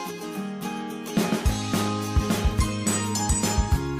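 No technical faults can be heard anywhere in the audio. There is nothing to mark at any point in it.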